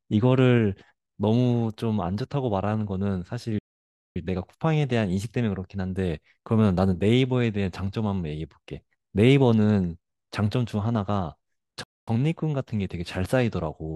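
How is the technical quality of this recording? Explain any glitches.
The recording has two playback stalls that interrupt the speech. The first runs from 3.59 to 4.16 s, about 0.57 s of silence; the second from 11.83 to 12.08 s, about 0.24 s. Each time the speech stops abruptly mid-flow, the output drops to silence, and the speech then resumes. The likely cause is the player running out of buffered data, or its playback thread being blocked, so nothing reached the output until it recovered.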